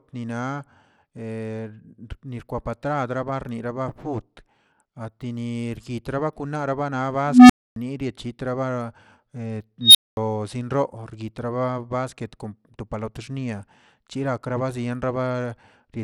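From start to finish the speech carries plainly audible codec damage, likely Bluetooth SBC compression. The treble thins out and flickers, and a gritty, grainy noise clings to the voice, which points to a low SBC bitrate of around 96 kbps. What marks this out from a perceptual codec such as MP3 or AAC is the absence of swirly, watery artefacts. Here the damage is coarse and steady, like a rough band-split with no hearing model behind it.

At 7.27 s, right after "fut atinir kitrabakunarba na", an unstable filter takes over. A low tone of about 300 Hz swells for roughly 0.23 s until it clips, then the audio drops to silence for about 0.27 s before the filter resets, ending at 7.76 s. A second unstable filter event runs from 9.81 s to 10.17 s with a high squeal around 4 kHz. It climbs faster, in about 0.14 s, and is followed by roughly 0.22 s of silence. In both cases a recursive filter with bad coefficients feeds its output back and grows until the numbers overflow. 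Unlike feedback howl, which builds more slowly and keeps ringing, each tone here explodes in a fraction of a second and ends in a hard cut to silence.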